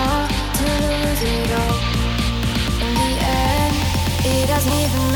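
Compressed frames are skipped twice: at 1.24 s the audio jumps ahead roughly 70 ms, which fits about three 26.1 ms frames, and at 2.81 s it jumps around 200 ms, fitting about seven.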